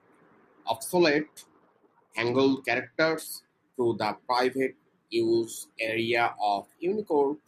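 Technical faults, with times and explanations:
0.95–3.27 s, Bluetooth SBC bit pool drop: the speech dulls and turns gritty. Starved high sub-bands and coarse quantisation fit a bit pool cut from 28 to 10.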